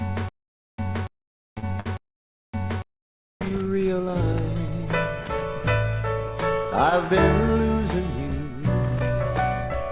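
From the first instant to 3.41 s there is a stutter with silent gaps. It is already under way when the clip opens. A 285 ms burst repeats three times, every 784 ms, with about 499 ms of digital silence between. The likely cause is a stalled player replaying its last fragment, and the audio for those gaps is lost. Inside that stretch come three short stalls from a late packet, at 1.58 to 1.74 s, 1.80 to 1.88 s, and 2.96 to 3.07 s. Each time the sound is held, for 46, 59 and 90 ms, while the receiver waits. Nothing is skipped, but the delay grows with each one. From 8.89 to 9.69 s a jitter buffer speed-up trims roughly 50 ms in small pitch-period cuts. The audio runs about 6% faster at the same pitch and sounds slightly hurried. Throughout, the band stops at 4 kHz, which fits a G.711 mu-law call path at 64 kbps.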